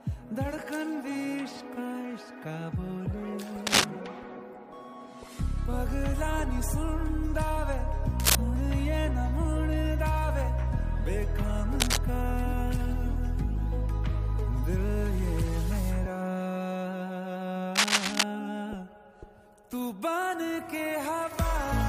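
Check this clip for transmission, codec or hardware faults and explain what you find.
Four short bursts of cable scratch noise interrupt the sound: 3.67 to 3.84 s, 8.20 to 8.35 s, 11.80 to 11.97 s, and a longer one from 17.75 to 18.23 s. Each is a dense, ragged rustle sitting roughly level with the sound or somewhat above it. The likely cause is a worn connector or lead being disturbed, so its contact resistance jitters and injects irregular noise. Unlike a single digital click or a dropout, these bursts are grainy and sustained over a fraction of a second, and the underlying sound continues beneath them.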